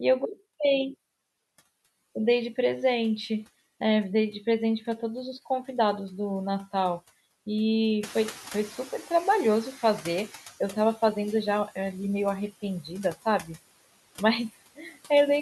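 Throughout the clip, noise suppressor artifacts are audible: background noise is pulled down by about 16 dB between words, rising under the speech. From 8.03 to 10.48 s the noise suppressor is catching up after the room noise jumps at about 8 s. It passes through with only about 11 dB of reduction, then sinks over roughly 2.45 s. At 12.84–13.5 s and 14.75–14.97 s, speech is cut by the noise suppressor. Quiet parts are pulled down by up to about 9 dB and then about 18 dB, over roughly a fifth of a second each, so they sound swallowed.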